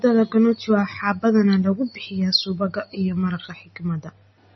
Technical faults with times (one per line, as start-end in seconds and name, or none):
0.00-4.55 MP3 compression